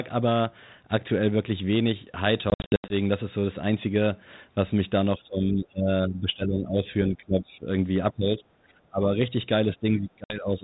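Packet loss on an ADPCM call breaks up this speech recording between 2.5 and 2.95 s. About 260 ms of audio drops out as hard-edged silences scattered across 400 ms, the longest run 80 ms, which points to roughly fifteen lost packets. A second hole of about 60 ms, roughly three packets, falls between 10.24 and 10.41 s. After each gap the G.726 decoder's adaptive predictor and step size no longer match the sender's, so the speech comes back slightly distorted before it resettles. The light codec damage fits a 32 kbit/s link.

Speech suppressed in double talk is the likely cause of a series of dips at 5.17–6.89, 7.09–7.66, 8.12–8.72, 8.9–9.2 and 9.76–10.63 s. In each, the talker is pulled down by about 20 dB, or about 15 dB in the last, and thins out or drops away in pieces. The echo canceller, hearing both ends at once, cannot separate the talker from loudspeaker echo and attenuates everything.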